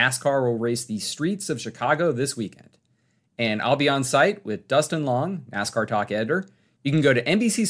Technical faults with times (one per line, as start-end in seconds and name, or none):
none